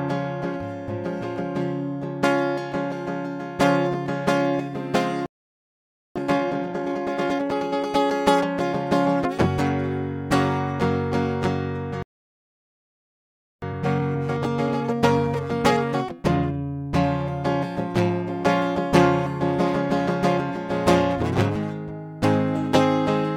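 At 5.26 s the music cuts out for about 0.9 s, a playback stall. The player likely ran short of data or was blocked. At 12.03 s a second stall leaves about 1.6 s of silence before the music resumes.

From 6.16 s to 7.94 s the music runs at 1.5 times speed but holds its pitch. This time-compressed catch-up clears the backlog by cutting and cross-fading small pieces. From 13.62 s to 16.62 s a milder catch-up runs at 1.1 times.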